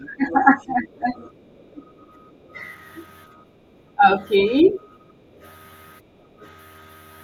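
A speech recording with three echo-canceller faults. Speech suppressed in double talk appears from 0.0 to 2.57 s, dipping by roughly 15 dB for about a second in total, and again from 3.95 to 4.8 s, roughly 10 dB down for about 0.3 s. The likely cause is the canceller mistaking overlapping talk for echo. Unlike a network dropout, the talker dips only while another voice is present. The other side's voice leaking through is heard from 0.05 to 1.65 s at roughly 20 dB below the talker, from 4.66 to 5.48 s at roughly 25 dB below, and as a faint scrap at 6.43 to 6.47 s. This is likely residual loudspeaker echo that the canceller failed to remove. It is a second, separate voice, not a smeared copy of the talker as reverberation would be. Background gated by the echo canceller drops the room sound by about 11 dB between 1.43 and 3.67 s and by about 12 dB between 5.08 and 6.42 s, for roughly 0.7 s in each stretch. 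The canceller pulls the microphone down while the loudspeaker plays. Unlike a noise gate, these drops follow far-end activity rather than the talker's own pauses.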